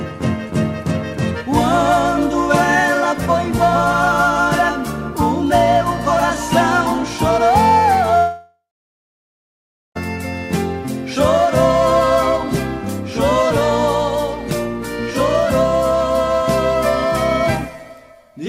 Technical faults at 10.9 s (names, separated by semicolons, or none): none